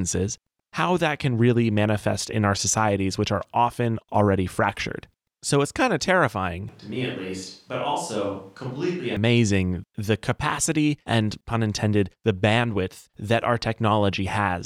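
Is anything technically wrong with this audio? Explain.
Yes. From 6.69 s to 9.17 s the speech suddenly turns roomy and hollow, with thinner bass, a level roughly 5 dB lower, and audible background noise sitting around 35 dB below the speech. The switch in and back out is abrupt. This is likely a switch to a distant microphone: the close mic's signal dropped out or was left out, so the recording picks up a farther mic that captures more room reflection and ambient noise and less direct, bass-rich sound.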